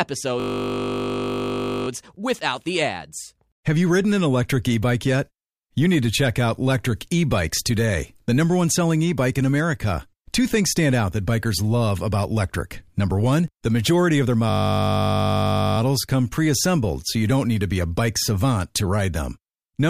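From 0.4 to 1.88 s, just before "without the ads", a system hang loop freezes playback. A 20 ms slice of speech repeats exactly, giving a steady 50 Hz buzz. It recurs from 14.5 to 15.78 s, between "the majority of their" and "come pre assembled so".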